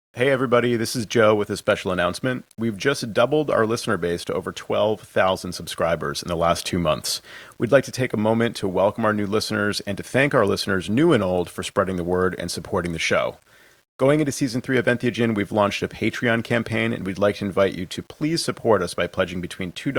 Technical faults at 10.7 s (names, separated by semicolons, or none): low bit depth without dither